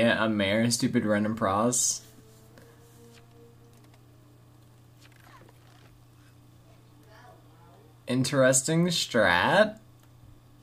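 Nothing technical stands out here; the audio runs along without any glitch, dropout or distortion worth pointing to.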